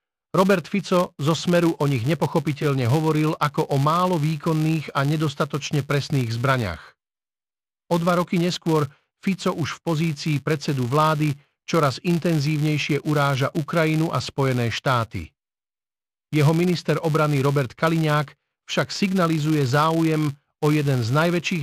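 Speech with a filter restarted on every block throughout: a 200 Hz buzz from 5 ms blocks that rises and falls with the speech and vanishes in pauses, unlike steady mains hum.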